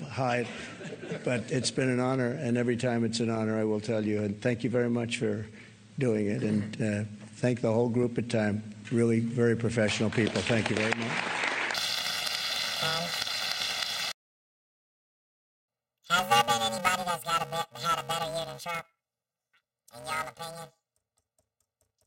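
From 11.74 s to the end there's planar audio read as interleaved: tiny blocks, which fit 128 samples, get shuffled, so it turns into a robotic 345 Hz buzz with no octave jump.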